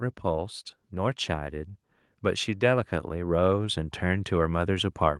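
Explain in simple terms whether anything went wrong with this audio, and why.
From about 2.59 seconds until the end, the recording gradually gets louder. The speech and the background hiss or room sound swell up together, as if someone were slowly turning up a volume knob. This is automatic gain rising: the recording system decided the input was too quiet and boosted its own volume step by step. Because it raises everything it hears, the background noise climbs along with the voice instead of the voice alone becoming clearer.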